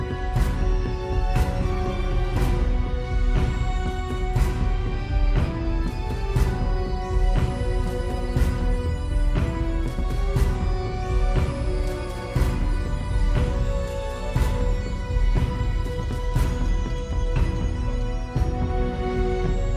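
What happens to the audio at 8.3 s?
Nothing goes wrong at 8.3 s; the audio plays through that moment intact, with no dropout, click or other fault.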